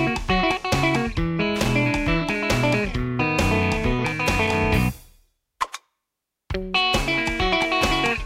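A short, irregular burst of crackle and scratching cuts across the sound from 1.56 to 1.69 s. This is loose connector crackle: a worn or dirty contact rapidly making and breaking, chopping the signal for about an eighth of a second.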